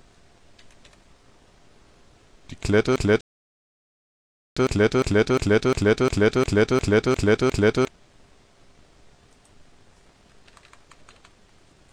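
From 2.96 s to 7.88 s the audio falls into a broken-record loop: the same 0.35 s fragment plays back to back, identically, ten times, and whatever should have been heard in that span never arrives. The likely cause is a stalled player, encoder or stream that kept re-sending the last piece it held. Exact, seamless repetition of one short slice, with no gap and no forward progress, is what separates this from a stall. A rebuffering stall sits inside that stretch, from 3.21 s to 4.57 s: the sound drops to silence for about 1.36 s and then picks up exactly where it stopped, because the player ran dry and waited for more data. Unlike the loop, nothing is lost here. Time is simply added, and it is heard as a clean silent gap rather than as repetition.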